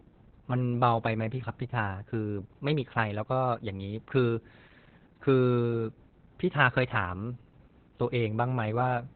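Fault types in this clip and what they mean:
Opus voice compression: The speech sounds muffled, hoarse and faintly robotic throughout, with nothing above about 4 kHz. This points to Opus running its SILK linear-prediction coder in narrowband at a very low rate, near 8 kbps, where the excitation is coded coarsely.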